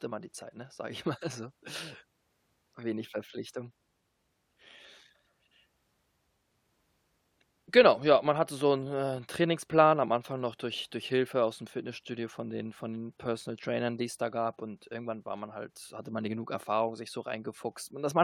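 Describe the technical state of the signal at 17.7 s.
At 17.7 s the speech signal is intact, with no audible technical fault at that moment.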